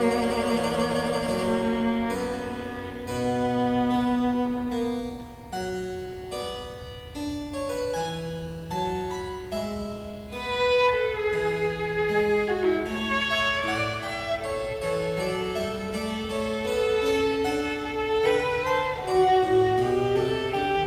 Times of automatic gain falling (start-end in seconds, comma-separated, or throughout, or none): none